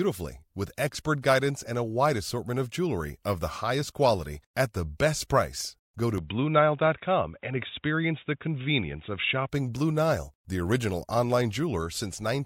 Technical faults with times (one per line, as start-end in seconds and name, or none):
6.18-9.49 input switched to a poorer device